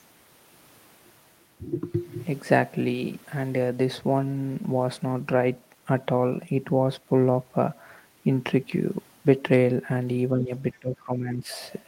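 Speech suppressed in double talk, 10.35 to 10.52 s: the speech dips briefly, by a few decibels. Both ends were likely talking at once, and the echo canceller, unable to separate near speech from loudspeaker echo, turned everything down.

Other side's voice leaking through, 10.73 to 10.79 s: a faint scrap of a second voice appears, far below the main speech. The echo canceller likely left part of the loudspeaker signal in the microphone feed.

Speech suppressed in double talk returns from 10.79 to 11.51 s, deeper and longer. For most of a second the speech sinks by about 15 dB, likely as the canceller again clamps down on overlapping talk.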